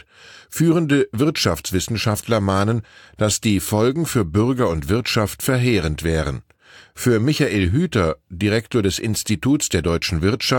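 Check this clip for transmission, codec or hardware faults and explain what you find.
Nothing faulty can be heard anywhere in the speech.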